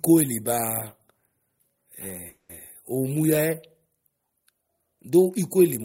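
Packets were most likely held up in transit between 2.29 and 2.51 s, leaving the receiver's jitter buffer empty and producing a call audio freeze. With no fresh audio to play, the receiver stretched the last sound into a fading buzz or hiss lasting about 200 ms rather than dropping to silence. Once the delayed packets arrived, the speech resumed exactly where it had stopped, so nothing is lost; instead, everything after that point runs about 200 ms late.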